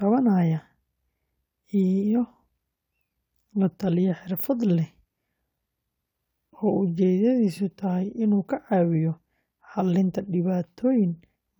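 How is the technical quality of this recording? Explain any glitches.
No glitches can be heard anywhere in this speech recording. There is nothing in it that needs explaining.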